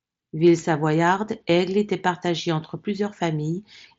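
Nothing stood out on listening to this speech, which comes through the Bluetooth mSBC headset link.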